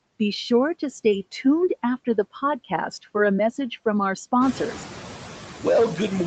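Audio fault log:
throughout, noise suppressor artifacts: bands judged to be steady noise are pulled down by about 10 dB frame by frame, so the background sinks in pauses and returns under speech, clearest after the room noise rises by about 14 dB near 4.5 s.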